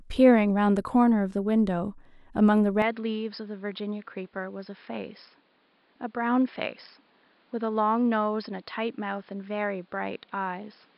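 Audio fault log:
2.82 s to end, input switched to a poorer device: with no gap, the speech turns dull and boxy, with nothing above 5.2 kHz, a drop of roughly 5 dB, and a new noise floor some 35 dB down. This likely reflects a change to a narrower-band microphone.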